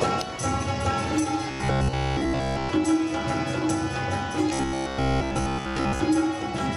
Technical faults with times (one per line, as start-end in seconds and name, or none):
1.51-2.69 robotic sound from repeated short buffers
4.53-6.00 robotic sound from repeated short buffers